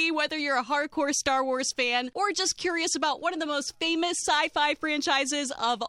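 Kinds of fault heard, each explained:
No technical faults can be heard in this audio.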